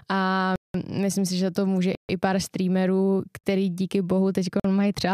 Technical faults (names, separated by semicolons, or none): block of digital silence